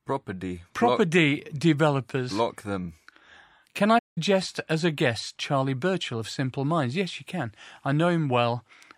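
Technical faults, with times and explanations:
3.98–4.18 s, playback stall: the speech just drops out for about 176 ms, then carries on with "as a guest". That's the sound of the player likely running dry of buffered data, or its thread getting blocked, so output goes silent until it catches up.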